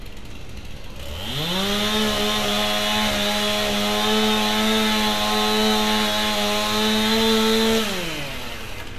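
No technical faults are audible.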